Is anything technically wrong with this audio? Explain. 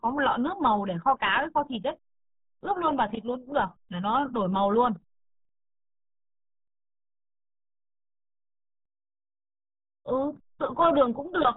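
Yes. For the whole clip the speech sounds muffled and gargly, with a watery, burbling texture and nothing above about 3.8 kHz. This is RealAudio 14.4 codec damage, and it is heavy. The RealAudio 1 speech coder models the voice with a handful of parameters and discards the top of the spectrum to squeeze through a dial-up modem link. That dull, bubbly result points to a bitrate of about 8 kbit/s.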